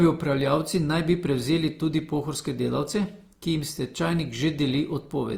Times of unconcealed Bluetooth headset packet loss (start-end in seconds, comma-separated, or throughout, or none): none